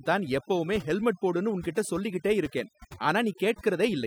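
Overdone noise removal runs through the whole speech clip. The noise reduction was pushed far too hard, so each frequency band that sits close to the estimated noise level is pulled down steeply or switched off. Low-level parts of the voice fall under that threshold and vanish along with the noise. Between phrases the background drops and breaks up into twinkling specks.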